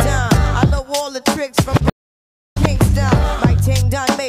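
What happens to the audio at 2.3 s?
At 2.3 s the audio is in a gap of silence lasting about 0.62 s, part of a stream reconnect spanning 1.90 to 2.57 s. When sound returns it fades in and picks up at a later point, skipping roughly a third of a second. The connection dropped, so the player went quiet, reconnected and started a fresh decoder mid-stream. That new decoder ramps in its first output, and since the stream had moved on, playback rejoins ahead of where it stopped.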